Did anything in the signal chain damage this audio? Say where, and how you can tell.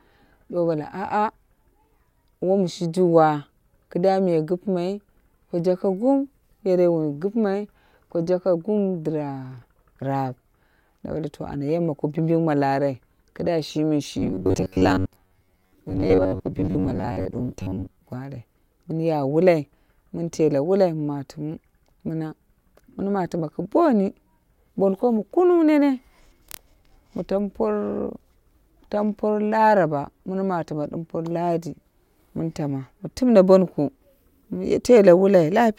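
Yes. Robotic sound from repeated short buffers runs from 14.19 to 17.99 s. The speech turns into a rigid, metallic buzz pitched at 93.8 Hz while still loosely tracking the words. That fixed pitch means a chunk about 10.7 ms long is being looped. The likely cause is an underrun at the driver or buffer stage: audio arrived too slowly, so the last short block was replayed and about half the real signal was skipped.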